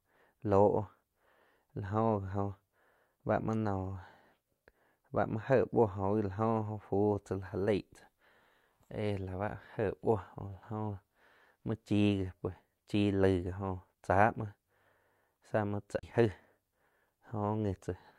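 CD skip at 15.99 to 16.03 s in this speech recording: a tick or short dropout of roughly 30 ms, after which the speech resumes from a different point in the material rather than where it left off. The laser was knocked or thrown by a flaw in the disc onto another turn of the spiral track. The player briefly muted while it relocked, then carried on reading from the new position, so the speech jumps discontinuously.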